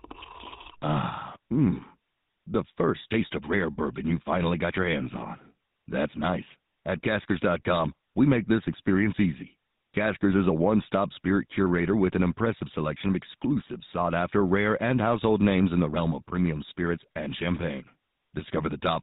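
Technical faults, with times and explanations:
Throughout: GSM full-rate codec, clearly audible as buzzy, gravelly speech with no content above 4 kHz, from regular-pulse excitation coding at a rate that fits 13 kbps.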